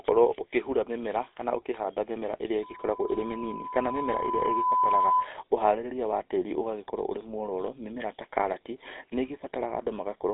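Throughout, the speech carries the buzzy, gravelly roughness of the GSM full-rate codec, its pulse-driven excitation, consistent with 13 kbps, cutting everything above 3.8 kHz, unlike plain band-limiting. From 2.62 to 5.33 s, a loudspeaker feedback squeal appears: a steady 1 kHz tone swelling over about two seconds to a few dB above the speech, one self-sustaining pitch rather than broadband noise.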